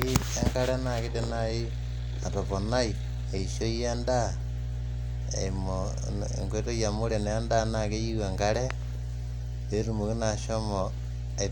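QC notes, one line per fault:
Throughout: mains hum, a steady 60 Hz tone with low harmonics sitting roughly as loud as the speech itself. Power-line current is leaking into the signal path, likely through a ground loop or a nearby transformer, so the buzz never lets up.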